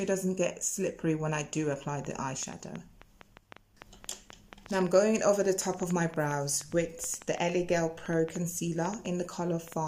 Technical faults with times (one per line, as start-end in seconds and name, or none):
2.05-9.73 train of clicks